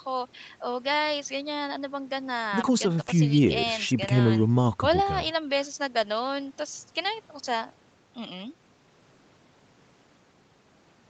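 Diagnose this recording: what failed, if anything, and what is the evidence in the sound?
Nothing stood out on listening to this speech recording; the only trace of the call's microphone processing is the expected trim of the lowest bass, with no content above 8 kHz.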